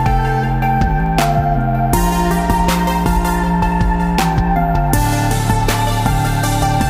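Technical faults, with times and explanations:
1.06 s and 3.29 s: dropped samples. Each is a single sharp click. A few samples likely went missing, making the waveform jump abruptly.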